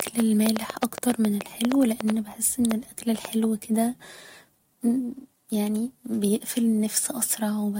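Something, likely interference from nearby equipment or a faulty connection, injects a train of clicks from 0.00 to 3.26 s: about fifteen similar pulses at an uneven pace near 4.9 per second, standing well above the speech and heard as irregular ticking, pauses included.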